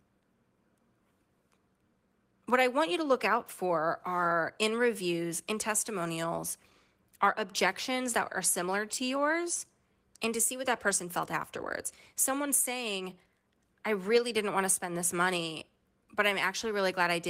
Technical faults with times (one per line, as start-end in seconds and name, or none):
none